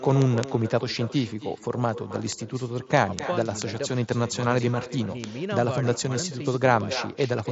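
A far end playing the call over a loudspeaker, with no echo canceller, sends the talker's speech back after a round trip of around 300 ms. Each phrase is followed by a quieter, thinner copy at about 14 dB below the original, through the whole clip. The speech is carried by the Bluetooth mSBC headset codec, which leaves nothing above 7.7 kHz. Separately, the digital link is being read by a receiver on its own free-running clock, which fits an offset of a few hundred ppm. These word clock ticks recur from 0.11 s to 7.51 s, roughly every 0.05 s and around 150 in all. Each one comes from a single sample being slipped and sounds as a sharp click of uneven strength.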